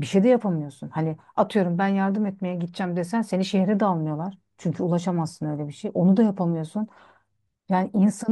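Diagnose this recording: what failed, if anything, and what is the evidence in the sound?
Nothing failed: the recording offers no evidence in the sound of any fault.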